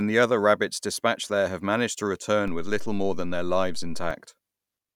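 At 2.48 s the speech gains a DC step: the waveform's zero line jumps to an offset of about -26 dBFS, as if an offset input were switched in, and holds there until 4.11 s, when it snaps back. Each jump is heard as a low thump beneath unchanged speech. On the waveform the trace sits visibly shifted for that span; the spectrogram shows brief broadband low-frequency bursts at both edges.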